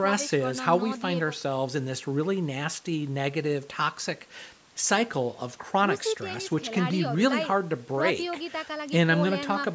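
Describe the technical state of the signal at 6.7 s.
At 6.7 s the speech is intact, with no dropout, distortion or other fault, only the ordinary call microphone processing, which trims the lowest bass and leaves nothing above 8 kHz.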